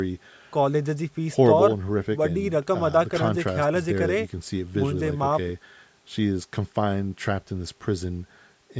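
No technical faults can be heard in this speech.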